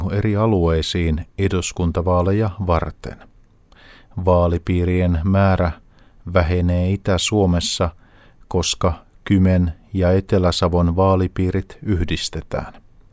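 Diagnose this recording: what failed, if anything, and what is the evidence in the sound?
Nothing in the speech recording points to a failure at any stage of the chain. There is no event in the sound that calls for a diagnosis.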